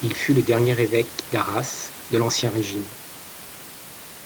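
No technical faults can be heard in this speech.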